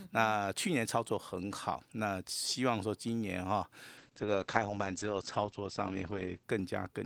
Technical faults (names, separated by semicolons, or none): call bitrate drop